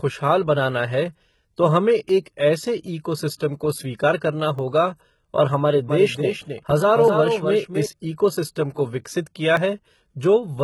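HE-AAC compression, heard from start to finish, leaves the speech's treble heavily damaged. The upper band is not the original signal. It is copied up from lower frequencies and shaped only by a coarse envelope, so its harmonics do not line up with those below the crossover, and s sounds come out gritty and metallic. The damage fits a low bitrate around 16 kbps, with HE-AAC v2 the likely codec.

Audio missing between chunks appears first at 2.09 s, then at 4.59 s, 7.08 s and 9.57 s, a regular 2.5 s spacing. At each point a few milliseconds of speech vanish and the two sides are butted together with no silence, producing a brief skip. The steady interval suggests the likely cause is a recorder or processor dropping a sliver of audio each time it closes one 2.5 s chunk and opens the next.

Pre-echo occurs at 3.38 s. For about 21 ms before a sharp attack, a short wash of hiss is audible, and the onset itself sounds softened and smeared. 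A transform codec spreads its quantisation noise evenly across a whole block. When a loud attack lands late in the block, noise scaled for that attack also fills the quiet stretch ahead of it.

A doubled audio track runs from 5.89 s to 7.86 s and overlaps the 7.08 s skip. A second full-band copy of the speech trails the original by about 300 ms at roughly 5 dB lower, with no decay or room colour, and it starts and stops abruptly. The likely cause is the same audio being mixed in twice, through a slower second capture path or an edit holding two copies out of step.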